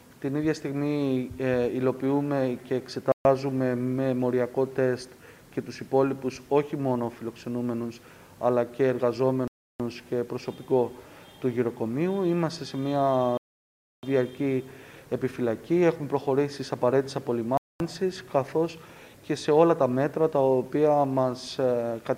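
Playback drops to dead silence four times: at 3.12 s for 130 ms, at 9.48 s for 322 ms, at 13.37 s for 656 ms, and at 17.57 s for 227 ms, with the sound returning abruptly after each gap. The pattern is likely a Bluetooth stall, where radio interference delayed packets, the headphones' buffer emptied, and output halted until retransmitted data arrived. The longest gap is near 13.4 s.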